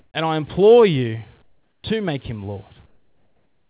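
At 0 to 0.14 s, 1.42 to 1.84 s and 2.86 s to the end, the real background gives way to comfort noise, a flat, featureless hiss about 9, 15 and 12 dB quieter. The sender likely stopped transmitting during pauses. Everything stays below 4 kHz.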